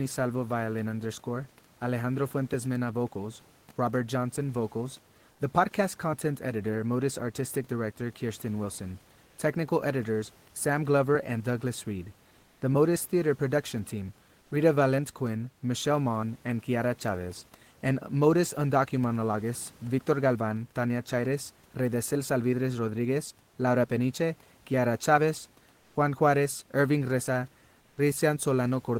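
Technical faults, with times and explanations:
12.39–12.61, 14.41–14.51, 25.79–25.95, 27.81–27.97 s: comfort noise in place of the background, likely from Opus discontinuous transmission halting the stream in pauses; the room noise becomes steady, featureless hiss, quieter by about 1–2 dB, about 6 dB at 25.79 s.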